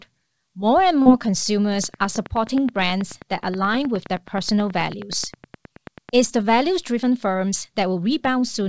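At 1.02 to 1.07 s, roughly 40 ms of the call's audio arrived too late for the decoder, producing short concealed packet loss. The receiver bridged about 35 ms of that gap by extending the preceding speech and then blending back, so the moment comes across as a brief smeared wobble.

From 1.84 to 6.10 s, a train of clicks runs through the speech, likely from interference or a faulty connection. Around forty similar pulses arrive evenly at 9.4 per second, peaking roughly ten decibels above the speech and ticking through the pauses too.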